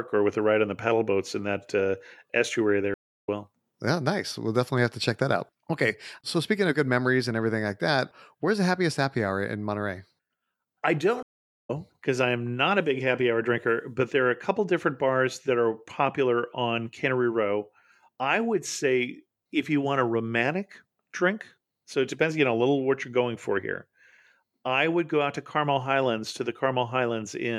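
At 2.94 s the speech cuts to silence for 318 ms and picks up at 3.29 s about a fifth of a second further on. At 11.23 s a 424 ms gap ends at 11.70 s roughly 0.4 s later in the stream. Each is a stream reconnect: the connection broke, and a fresh decoder joined the live stream where it now stood, entering muted or faded in. Unlike a plain dropout, material is skipped rather than merely paused.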